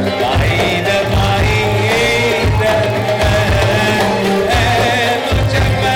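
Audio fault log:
Throughout, block size mismatch (padded): one stage is handing over blocks just a touch shorter than the next stage reads, so the leftover at the end of each block gets filled with silence. Those tiny gaps repeat at about 43.1 Hz, which fits a 1024-sample read block, and that steady repetition is the low buzz riding under everything. The padding is so small that the audio only runs slower by a factor of 0.999, so the pitch sounds normal.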